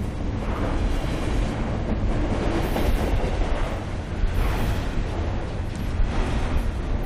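No technical faults can be heard anywhere in this recording.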